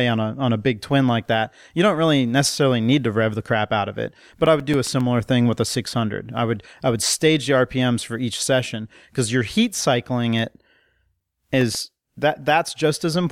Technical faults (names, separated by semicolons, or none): CD scratch ticks